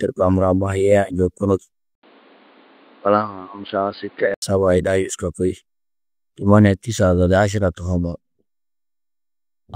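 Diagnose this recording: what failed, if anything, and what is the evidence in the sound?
Driver-level fault: the input was likely switched to a poorer device. From 1.95 s to 4.42 s, after an 80 ms silence, the speech loses everything above 4.8 kHz, drops a few dB in level and carries a new background hiss, pointing to a narrower-band microphone.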